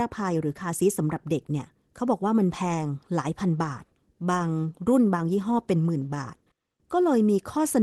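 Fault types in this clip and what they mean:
No faults found in this speech clip; the usual coding texture and the top end rolling off around 12 kHz fit the normal behaviour of the call codec path, not a defect.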